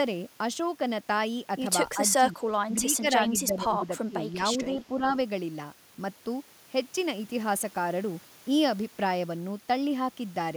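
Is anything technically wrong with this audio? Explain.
Yes. The speech suppressed in double talk dips at 1.94–2.41 s, 2.66–3.86 s, 4.08–4.78 s and 4.97–5.14 s, falling by up to about 15 dB. An echo canceller likely mistook overlapping far-end talk for echo and attenuated the talker.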